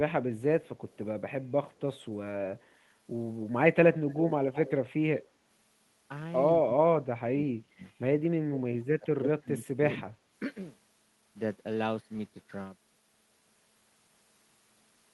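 Echo leak appears three times: 0.65 to 0.97 s, 1.71 to 2.03 s, and 4.09 to 4.71 s. A copy of the speech trails the original by 150 ms. The first two are very faint, roughly 40 dB down. The third is much stronger, only about 15 dB under the speech. The likely cause is a far-end echo canceller that failed to remove loudspeaker sound from its microphone and sent the residue back.

Speech suppressed in double talk follows in four dips: 6.58 to 6.92 s, 7.23 to 7.82 s, 8.18 to 8.63 s, and 8.99 to 10.05 s. In each, the level falls sharply, by roughly 25 to 30 dB at the deepest point, so stretches of the speech are ducked to near silence and come back in pieces. This is likely an echo canceller that could not separate local speech from loudspeaker echo while both sides talked and attenuated everything.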